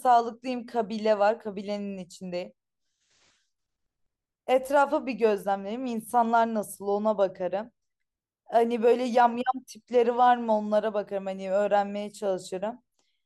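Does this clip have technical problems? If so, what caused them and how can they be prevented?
No, there are no technical problems in this recording.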